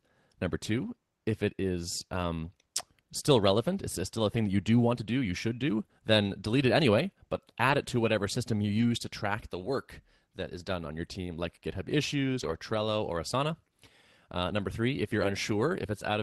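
At 2.13–2.23, 7.67–7.73, 8.77–8.83, 11.03, 12.39–12.53 and 15.19–15.29 s, a lost packet rebuilt from error correction briefly roughens the sound with extra noise. Unlike plain concealment, there is no gap or smeared repeat.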